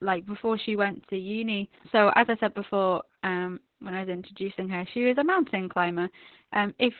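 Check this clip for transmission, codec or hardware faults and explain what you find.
One codec fault runs through the whole clip. Opus voice compression: nothing above 4.2 kHz survives, which points to narrowband SILK at about 8 kbps. The narrow band and coarse excitation coding leave the speech muffled, hoarse and slightly robotic.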